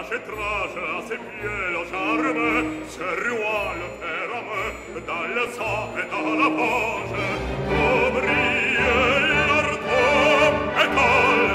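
At 5.47 s a short burst of DAB burbling breaks through, and a longer one runs from 8.35 to 8.47 s. Weak reception lets bit errors slip past the error correction into the MP2 audio data, so corrupted samples put short blips of noise in individual sub-bands and corrupted scale factors make sub-bands jump in level for up to a frame. The first event is heard as a few watery blips over the sound. The second event is stronger and spreads over several frames, which fits a higher error rate of roughly a fifth of a percent.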